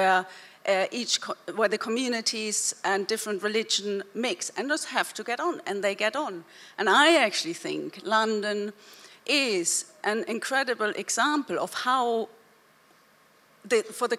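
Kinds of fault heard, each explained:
Nothing stood out as a technical fault on listening.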